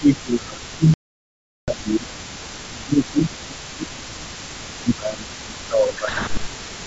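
Speech suppressed in double talk runs from 0.0 to 2.25 s. The speech dips by up to about 20 dB, thins out and breaks into pieces for roughly two seconds. The likely cause is both ends talking at once: the echo canceller could not tell the near talker from loudspeaker echo, so it turned everything down.

Echo leak begins at 0.12 s and continues to the end of the clip. A faint second copy of the speech trails the original by 291 ms, sitting about 25 dB below it. This likely comes from a loudspeaker phone on one side whose echo canceller left part of the microphone pickup in place, so the residue was sent back down the line.

Packet loss on an ADPCM call opens a hard-edged hole from 0.94 to 1.73 s, with 740 ms of audio missing. That span fits around forty lost packets. The decoder filled the gap with silence, and its adaptive predictor and step size drifted out of step with the sender. When the sound returns it comes back slightly distorted, then settles within tens of milliseconds.

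Speech suppressed in double talk returns from 2.68 to 4.38 s and again from 4.8 to 6.84 s. Each time the level drops by up to about 20 dB, over roughly one and a half seconds in the first span and about two seconds in the second. The sound fades, loses its top end and cuts out in pieces, the same pattern as in the opening stretch.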